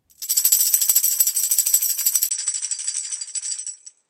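At 2.29 s a 20 ms gap splits the sound, which then stays duller and about 5 dB quieter to the end, with nothing above 9.9 kHz and a faint new noise floor. The spectrogram shows a flat ceiling and a thin blank stripe. This is likely an input switched to a poorer device.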